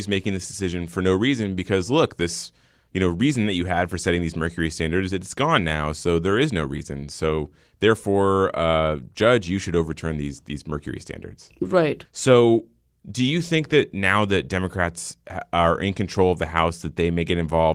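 Nothing stood out on listening to this recording.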